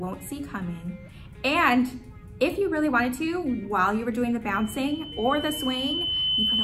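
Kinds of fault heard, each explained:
Loudspeaker feedback squeal: a microphone is picking up the loudspeaker it drives, and at 3 kHz the loop gain rises above one, so that frequency feeds on itself. From 4.54 s a pure 3 kHz tone swells over roughly two seconds until it sits a few decibels above the sound and runs to the end. A spectrogram shows one bright horizontal line strengthening at 3 kHz. The waveform's envelope climbs steadily, dominated by a regular sinusoid.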